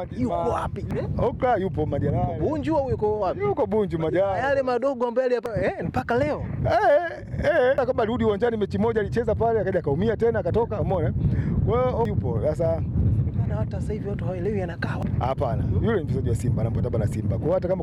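Damaged data in a compressed stream produces brief chirps or blips at 0.91, 5.46, 7.78, 12.05 and 15.03 s, where the decoder misreads corrupted frames and briefly loses sync.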